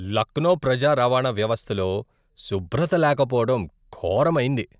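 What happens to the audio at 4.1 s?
Nothing goes wrong at 4.1 s: the speech carries on cleanly there, with no dropout, click, distortion or other fault at that moment.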